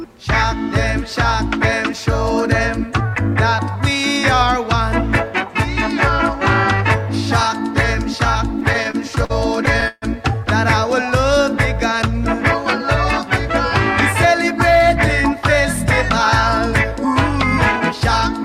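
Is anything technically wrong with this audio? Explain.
Yes, two faults are present.

From 8.49 to 10.04 s, repeated stalls (stutter): late packets emptied the jitter buffer ten times. Gaps up to 144 ms were filled by continuing and fading the last sound, showing as smeared, repeated spectral frames.

From 14.25 to 15.36 s, jitter buffer speed-up: short pitch-period pieces were cut to shed excess delay. The audio runs at 104% speed without a pitch change, and the waveform looks slightly compressed in time.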